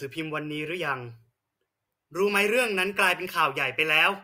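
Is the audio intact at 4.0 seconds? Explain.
Yes, at 4.0 seconds the speech plays through cleanly, with no dropout, click, distortion or other fault to be heard at that moment.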